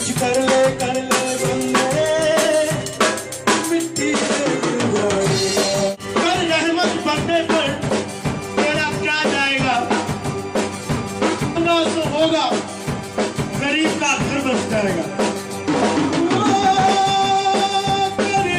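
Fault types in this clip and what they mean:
Damaged data in a compressed stream: at 7.85 to 7.91 s, 11.52 to 11.57 s and 16.81 to 16.86 s, each lasting about 50 ms. Corrupted bytes in the encoded stream leave the decoder reading frames it cannot interpret correctly. It misreads or drops those frames, heard here as three short disruptions, then loses frame sync and searches for the next valid header before normal sound resumes.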